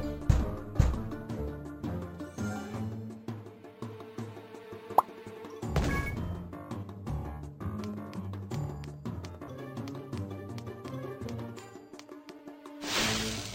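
From start to finish the audio carries crude rate conversion: samples were simply repeated to stretch the stream to a higher rate, with no filtering. The repeat pattern fits a conversion from 32 kHz to 44.1 kHz. The resulting error sits roughly 25 dB below the signal and is heard as a gritty, inharmonic fizz riding on loud and bright passages. A spectrogram shows faint mirrored tones unrelated to the sound's own partials, and a zoomed waveform shows small stair-step plateaus.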